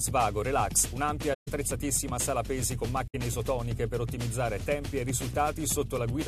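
At 1.33 to 1.48 s and again at 3.08 to 3.15 s, a corrupt frame was concealed. The decoder caught damaged AAC frames and covered them, so instead of a squeak the damage spans about 150 ms and then 75 ms. These lengths suggest roughly six and three frames.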